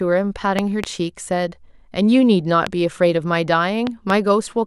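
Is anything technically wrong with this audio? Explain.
Yes. The speech carries loud pops in three places. A double pop runs from 0.59 to 0.86 s. A single pop falls at 2.67 to 2.69 s. Another double pop spans 3.87 to 4.12 s. The first two peak about 15 dB above the speech and the last about 10 dB. Each is a sharp, brief thump laid over the talking, which continues underneath. The likely cause is a sudden voltage pulse from a plug, switch, static discharge or driver glitch.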